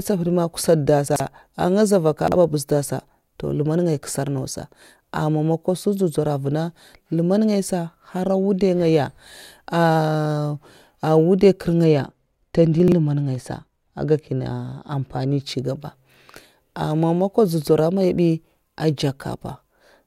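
At 1.08 to 1.2 s the speech jumps briefly: chunks out of order. Audio is handled in 40 ms blocks here, and one block plays two blocks late, after the two that should follow it. No audio is lost, but the reordered section is heard as a jumbled moment. The same fault returns at 2.28 to 2.36 s, right after "za mvaka", where a 40 ms block lands one block late.

From 11.84 to 15.41 s the speech turns dull and muffled: de-emphasis applied wrongly. A treble cut meant to reverse pre-emphasis acts on audio that needs no such correction, so the response slopes smoothly downward with frequency, reaching about 10 dB down at 10 kHz relative to 1 kHz. Inside this dulled stretch, at 12.8 to 12.92 s, chunks are out of order again, with a 40 ms block arriving two blocks late and a garbled jump.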